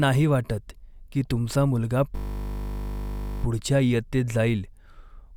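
From 2.16 to 3.44 s the speech becomes a steady 50 Hz buzz. This is a system hang loop: one 20 ms buffer repeats while the driver is frozen.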